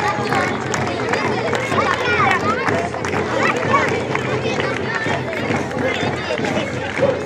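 From 2.73 to 7.23 s, a train of clicks ticks evenly 4.7 times a second, likely interference or a faulty connection or supply; steady spacing distinguishes it from random crackle.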